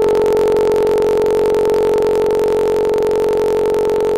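From start to finish the music carries a block size mismatch (truncated): one stage hands over longer blocks than the next stage takes, and the tail of each block is discarded. The resulting jumps produce a steady buzz near 46 Hz, which fits 1024-sample blocks, and the music plays 1.07 times fast with its pitch roughly unchanged. A spectrogram shows vertical stripes every 22 ms or so, and the waveform shows steps at each block boundary.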